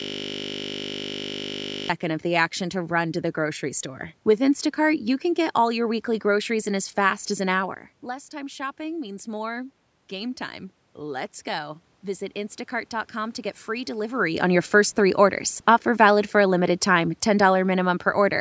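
Speech, opening with a system hang loop already under way at 0.0 s and lasting to 1.89 s: a 20 ms slice of audio repeats exactly, nearly a hundred times, giving a steady 50 Hz buzz. This is consistent with the driver stalling while the hardware keeps replaying a 20 ms ring buffer. From 14.76 to 18.36 s, automatic gain falling lowers the level by about 3 dB, so the voice and the room noise sink together. This differs from the talker's own movement around 14 s, which changes only the voice level.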